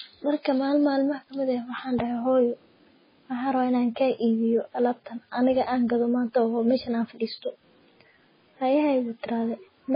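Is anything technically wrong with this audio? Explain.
Yes. The speech shows heavy MP3 compression damage throughout. Nothing sounds above 5 kHz, and the sound is watery and swirly, with metallic chirps on s sounds. The likely cause is a bit-starved encoder, fitting roughly 16 kbps. It cuts treble and drops weak frequency lines, which flicker between frames.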